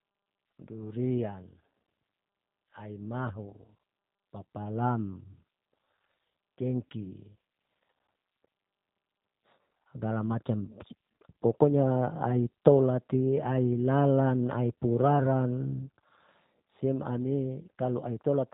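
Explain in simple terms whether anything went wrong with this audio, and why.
Throughout the recording the voice sounds muffled and slightly rough, with a buzzy, synthetic edge. The cause is the G.729 codec, a phone-call compressor that rebuilds speech from a simplified model of the voice and drops everything above about 3.8 kHz.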